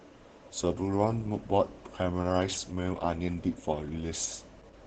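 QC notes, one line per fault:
Throughout: Opus voice compression. The speech sounds muffled and hoarse, with a faintly robotic edge and nothing bright above the 8 kHz ceiling of a wideband signal. This comes from the SILK linear-prediction coder running at only 10 kbps, where the excitation between the predicted spectral envelopes is quantised very coarsely in 20 ms frames, so the natural breathiness and detail of the voice are replaced by a rough, buzzy approximation.
0.61–4.87 s: mains hum. A steady low tone at 50 Hz enters at 0.61 s and stays until the end, sitting about 20 dB below the speech with a few low harmonics above it. It does not rise or fall with the talker, which points to the power line leaking into the signal path through a ground loop or a nearby transformer rather than to anything in the recorded sound itself.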